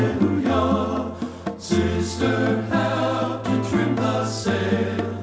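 No technical faults can be heard anywhere in the clip. It has passed through a working WebRTC call path, and the audio stops at 8 kHz, which fits a wideband call codec such as G.722.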